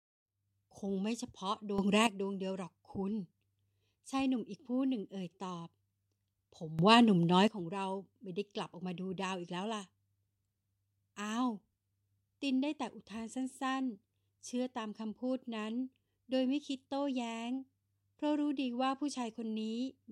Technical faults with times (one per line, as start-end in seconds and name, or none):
1.78-2.07 sudden gain jump
6.79-7.48 sudden gain jump